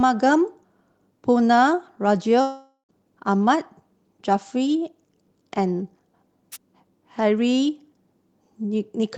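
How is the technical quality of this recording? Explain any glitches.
Two glitches interrupt this speech recording.

From 2.41 to 2.92 s the speech breaks off and is replaced by a fading buzzy continuation of the last sound, thinning to near silence for about a tenth of a second before speech resumes with roughly half a second of material gone. This is likely a long network dropout: the packets for that stretch never arrived, so the receiver stretched out what it last had, let it decay, and then picked up from later audio.

At 6.52 s a brief swish of static, about 50 ms long, washes over the speech. This is a wireless microphone noise hit: the analogue FM radio link faded momentarily as reflected signals cancelled at the receiver, so the receiver's own noise rose and briefly covered the voice before the signal recovered.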